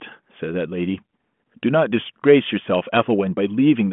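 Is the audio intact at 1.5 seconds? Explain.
Yes, the audio is intact at 1.5 seconds: the speech comes through the telephone-band G.726 path without any fault at that moment.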